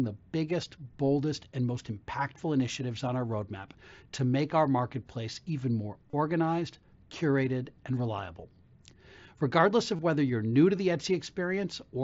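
Speech with concealed Bluetooth headset packet loss, heard at 3.41 s after "impactful initiatives on our", at 6.10–6.13 s after "our marketplace even more", and at 9.96–9.99 s just before "whether you're new to". The first gap, about 7.5 ms, is nearly hidden. The two 30 ms gaps, which point to runs of four lost packets, are refilled with a repeated stretch of recent waveform that sounds buzzy at full level. On a waveform that stretch shows as a periodic copy. On a spectrogram it shows as flat harmonic bands ending in a slight smear, all within the 8 kHz band of the mSBC link.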